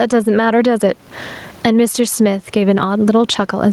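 Throughout the speech, the gain swings around 20 dB: gain pumping, likely from excessive input gain forcing a fast limiter.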